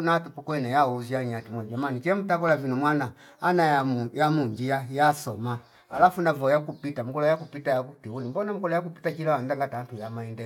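Regular clicks mark the speech every 0.66 s from 0.51 to 10.40 s, likely clock drift buffer slips repeating or dropping a few samples.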